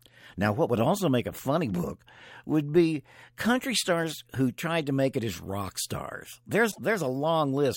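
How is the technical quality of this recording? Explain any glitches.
The recording has one glitch. At 6.68 to 6.78 s, right after "it as rock stars", damaged data in a compressed stream produces a brief disturbance. The decoder misreads corrupted frames, loses sync and hunts for the next header. It lasts about 0.1 s.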